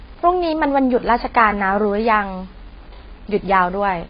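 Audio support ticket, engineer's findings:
Grainy, hissy distortion riding on the speech for the whole clip, around 30 dB below the signal, rougher on quiet passages. Likely cause: low bit depth without dither. Rounding to an 8-bit grid fits, with error tracking the signal.

Dull, band-limited speech with a smeared, warbling texture throughout, no content above 5 kHz and heavy codec damage. Likely cause: AAC compression, consistent with AAC-LC near 16 kbps starving high bands and coarsely quantising the rest.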